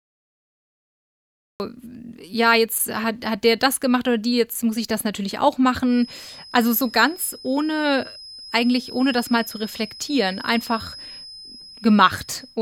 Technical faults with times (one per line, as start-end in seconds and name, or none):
0.00-1.60 cut-off start